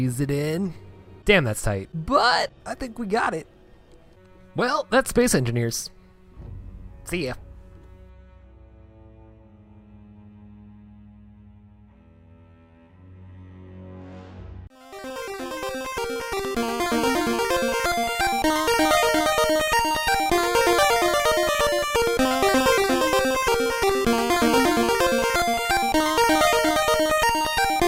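No faults are audible anywhere in the clip.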